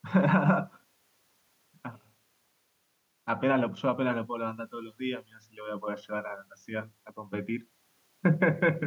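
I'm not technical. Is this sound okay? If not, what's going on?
Yes, this sounds okay.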